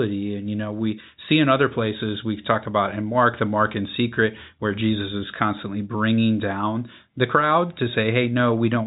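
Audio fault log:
Nothing to log here, as the speech comes over an ordinary G.711 telephone line that simply tops out around 3.8 kHz, and no faults turn up anywhere.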